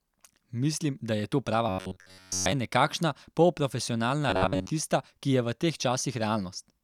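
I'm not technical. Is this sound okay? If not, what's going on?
No, not quite. Twice the speech turns into a stiff, metallic buzz: from 1.69 to 2.52 s and again from 4.30 to 4.70 s. That's robotic sound from repeated short buffers, likely caused by audio arriving too slowly, so playback loops tiny 11 ms slices, making a steady 94 Hz drone.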